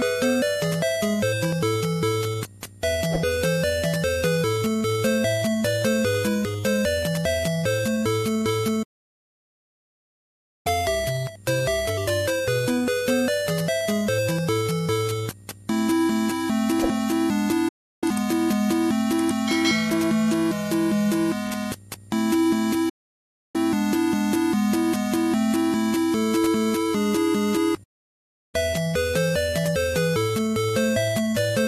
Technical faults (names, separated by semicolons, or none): digital broadcast dropout